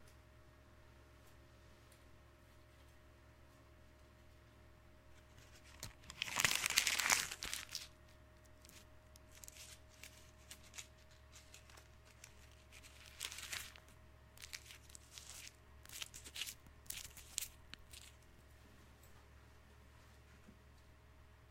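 Playback repeatedly ran short of new data, so the device replayed its last buffer in a repeated buffer fault on this everyday-sound recording. A roughly 46 ms chunk, consistent with a 2048-sample buffer, sounds twice with hard joins at 0.70, 6.92 and 9.47 s, and three times from 18.30 to 18.39 s. Each repeat is a brief stutter that displaces around 50 ms of audio, or about 100 ms at the last one.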